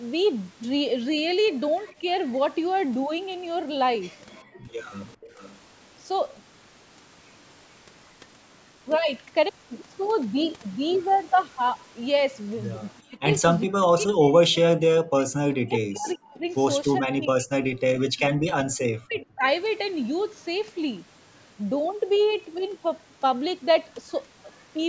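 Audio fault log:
4.43–4.72 s and 18.33–18.45 s, background gated by the echo canceller: the room sound ducks hard, by about 34 dB in the first spot and about 40 dB in the second, for roughly 300 ms and 100 ms. The canceller clamped the mic while the loudspeaker was playing, then let go.
5.07–5.58 s, 12.97–13.02 s, 16.09–16.14 s and 18.18–19.26 s, echo leak: a faint delayed copy of the voice trails in, about 0.41 to 0.43 s late and well below the main speech, from about 25 to about 35 dB down. It's most likely loudspeaker pickup that the far end's canceller didn't fully scrub, so it got sent back.
13.05–19.45 s, speech suppressed in double talk: through this stretch the talker keeps dipping, at worst by something like 40 dB, and drops out in pieces, with roughly four seconds affected in all. Both sides are likely talking at once, and the canceller is turning both the talker and the loudspeaker echo down.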